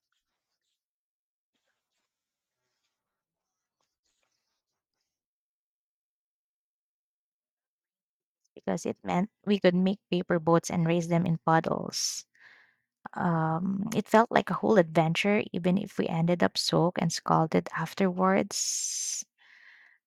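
A sharp tick at 11.26 s and another at 17.0 s interrupt the speech. Each is a block of digital silence, about 0.73 ms and 1.45 ms long, consistent with 32- and 64-sample buffers left unfilled. The abrupt cut to zero and back makes each click.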